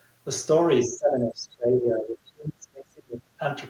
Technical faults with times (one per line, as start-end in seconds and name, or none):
0.83-3.40 speech suppressed in double talk